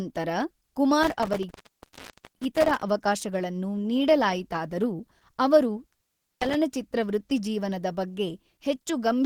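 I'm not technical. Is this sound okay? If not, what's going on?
No. The speech has likely been squeezed hard by Opus compression, which throws away detail to save space and has switched to its speech-oriented mode. The result is a voice that sounds muffled, hoarse and grainy from start to finish.

There is also an intermittent contact, where a loose cable or plug briefly loses connection. At 1.03 to 2.83 s the sound drops out for almost a second, and at 5.88 to 6.55 s for a little under half a second, with crackles at each break.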